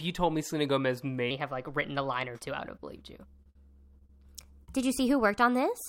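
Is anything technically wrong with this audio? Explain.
Yes. From 1.31 s to the end, this speech has a section at the wrong speed. It runs about 1.14 times faster than it was recorded. Speed and pitch rise together, so the voice jumps up by roughly two semitones and sounds hurried and thin. The change is abrupt, not gradual. The likely cause is an editor or player fitting this part to the wrong clock, which reads the samples out too quickly.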